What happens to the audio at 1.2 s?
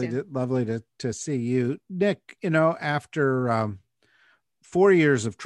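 Nothing goes wrong at 1.2 s; the speech carries on intact through that moment.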